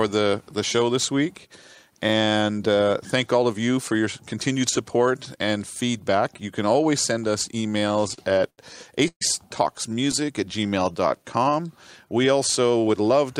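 Repeated stalls (stutter) run from 7.70 to 8.59 s. Packets kept reaching the receiver late or slower than playback, so the jitter buffer emptied ten separate times in that stretch. Each time the last sound was carried forward until data arrived, the longest such wait lasting 84 ms. In all, 196 ms was filled in, about 22% of the span, with nothing lost. The result is audio that drags and catches repeatedly.

A call audio freeze follows at 9.08 to 9.22 s. The audio halts, and 131 ms is padded in: the last sound is stretched on and fades, and 80 ms of that is silence. This was likely caused by packets being held up in transit until the jitter buffer ran dry. Playback then resumes where it left off, with nothing missing, and the wait shows up as a 131 ms increase in delay.

A jitter buffer slow-down covers 9.89 to 11.51 s. To rebuild its reserve, the receiver repeated individual pitch periods and fragments of pauses many times over, inserting 166 ms in total. 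The audio therefore plays at about 90% speed while keeping its original pitch, so sounds in this passage come out drawn out and the pacing feels sluggish compared with the surrounding material.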